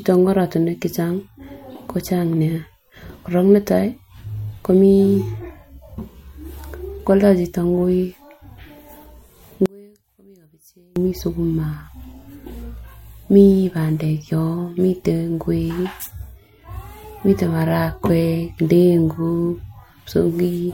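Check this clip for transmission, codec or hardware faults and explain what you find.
One fault appears, from 9.66 to 10.96 s: the speech suddenly collapses by about 34 dB and turns faint. The likely cause is one channel inverted, with one side's polarity flipped so that the centred speech cancels when both channels are summed to mono.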